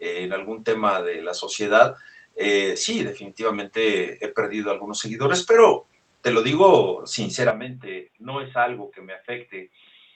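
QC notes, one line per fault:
7.50 to 10.16 s, input switched to a poorer device: right after "pero te lo digo" the speech suddenly goes dull and boxy, with nothing above 3.8 kHz, compared with the roughly 8 kHz you hear earlier through the Opus call path. The level drops by around 10 dB and a faint new noise floor appears well under the speech. There's no gap at the switch, so the likely cause is the system swapping to a lower-grade mic or a headset call profile for the rest of the clip.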